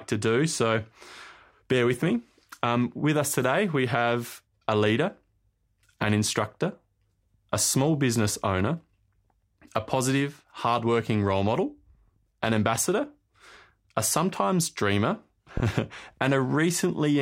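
Sharp single pops, roughly ten decibels above the speech, strike at 12.76–12.80 s and after "a sometimes dreamer" at 15.57–15.61 s. These loud pops are likely brief voltage spikes.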